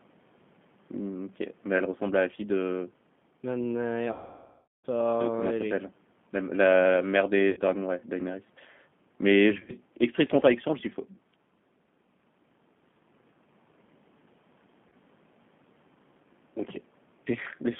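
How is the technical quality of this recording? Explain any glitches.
The recording has plainly audible coding damage throughout and four gaps filled in by the decoder.

The whole clip carries G.729 codec damage, consistent with the 8 kbit/s G.729A variant. The codec resynthesises speech from a vocal-tract filter, pitch predictor and sparse pulses, and the line is limited to 150 Hz to 3.5 kHz. The result is muffled, slightly rough and synthetic-sounding speech.

VoIP packet loss concealed by the speech codec occurs at 4.12–4.87 s (about 720 ms lost), 7.50–7.60 s (70 ms), 9.57–9.74 s (90 ms scattered over 120 ms, longest run 40 ms) and 14.89–14.93 s (30 ms). The decoder extends its last pitch and filter while fading the gain, producing a buzzy, stretched tone. This is most obvious in the long 4.12 s gap, and speech stays weakened briefly after each gap.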